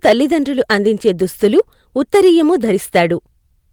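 Speech with hard clipping on peaks at 0.06–0.13 s, 0.71–1.09, 1.44–1.60, 2.14–2.30 and 2.95–3.02 s, overdriven by about 3–7 dB, flattening tops into harsh crackle.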